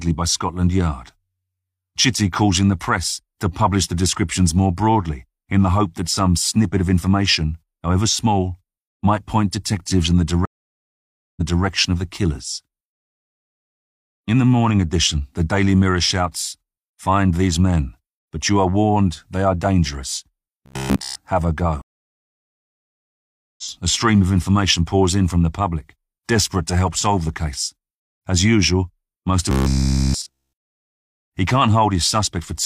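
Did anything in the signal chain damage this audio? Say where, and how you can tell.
Yes. At 10.45 to 11.64 s the sound drops out for about 0.91 s, then resumes 0.28 s earlier, repeating material. At 21.82 to 23.63 s there is a 1.76 s gap, and it resumes roughly two seconds later. This is a stream reconnect at the network stage: the player lost the connection, restarted its decoder mid-stream, and rejoined at a different point.

At 20.66 to 21.15 s and again at 29.51 to 31.13 s, the speech becomes a rigid, metallic buzz at 66.8 Hz. This is robotic sound from repeated short buffers, likely at the driver or buffer stage. Audio arrived too seldom, so a chunk of about 15 ms was looped throughout each stretch.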